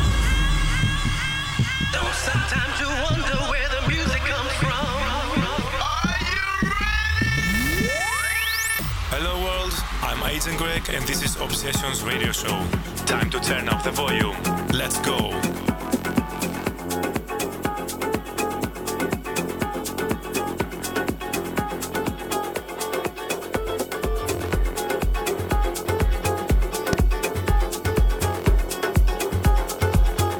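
At 2.03 to 2.06 s a single loud pop cuts sharply through the audio, standing roughly 10 dB above it, and at 26.93 to 26.95 s a second, harder pop peaks roughly 20 dB above. The sound continues beneath each one. Each is likely a brief voltage spike, such as from a switch or a static discharge, added to the signal. A waveform shows a tall, narrow spike. A spectrogram shows a thin vertical stripe spanning all frequencies.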